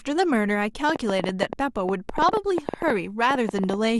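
A speech recording with a train of clicks from about 0.9 s to 3.75 s: roughly thirty similar sharp ticks at about 9.5 per second, unevenly spaced, peaking about 15 dB above the speech and audible in pauses too, likely from electrical interference or a faulty connection or power supply.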